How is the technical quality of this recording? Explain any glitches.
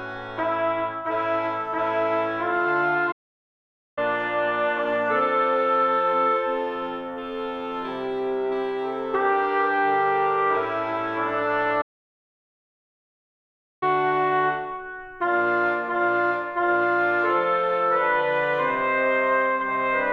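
The recording has two playback stalls. At 3.11 s the sound cuts to silence for about 0.85 s and resumes at 3.98 s. At 11.81 s it stops again, this time for 2.0 s, and returns at 13.83 s. Each break lands mid-flow with no fade. The likely cause is the player running short of data, or its thread being blocked, so nothing reached the output until it caught up.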